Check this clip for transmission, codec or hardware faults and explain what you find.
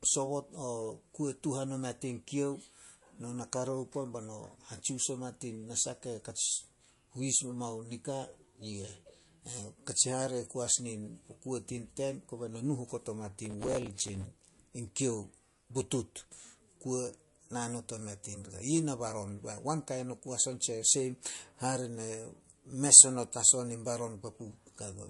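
Two faults stand out. One runs through the whole speech clip. The other is a short burst near the middle.

MP3 compression is the likely cause of the first. The damage is plainly audible throughout. There is nothing above 11.3 kHz, so the treble is cut off at that point. When bits run short, the encoder discards weaker frequency lines, and these drop in and out from frame to frame. The result is a watery, swirly texture with smeared attacks. That fits a low bitrate, somewhere around 48 kbps.

Processor overload crackle runs from 13.46 to 14.25 s. Across that stretch the processor repeatedly failed to finish its small audio buffers on time. Each missed buffer was filled with old audio, spliced in with hard edges. The sound points to buffers of about 5 ms, missed around 50 times across the stretch. Together they form a gritty crackle laid over the speech. It stops once the load passes.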